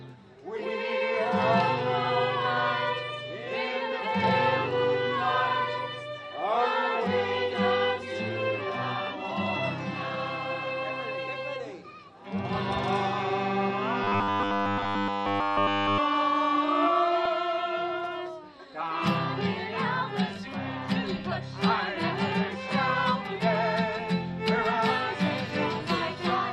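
From 14.04 to 15.99 s the sound turns into a rigid, metallic buzz. This is robotic sound from repeated short buffers. The buzz sits at a fixed 100 Hz, which fits a 10 ms chunk being replayed over and over. Across that stretch, essentially all of the audio is repeated material. The true signal is skipped. The likely cause is new audio arriving too seldom, so playback loops the last short buffer to fill the gap.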